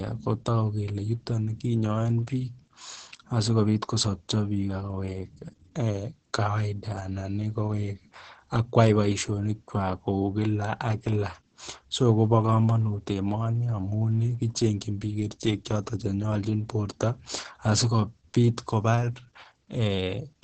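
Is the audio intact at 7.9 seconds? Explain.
No. At 7.9 seconds, as throughout the clip, the speech has passed through Opus voice compression running its SILK linear-prediction coder at a very low rate, which fits a bitrate of around 10 kbps. The coder has narrowed the band so that nothing survives above 9 kHz, and it codes the excitation coarsely. The damage is heavy: the speech sounds muffled, hoarse and slightly robotic, with the crisp top end of consonants gone.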